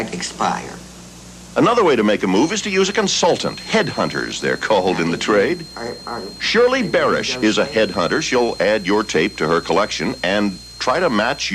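From 2.31 s to the end, a feedback whistle sits behind the sound. It is a thin, steady tone at 4.2 kHz, roughly 20 dB below the main signal. It swells and fades slowly in level. The likely cause is a loudspeaker-to-microphone loop held just short of runaway.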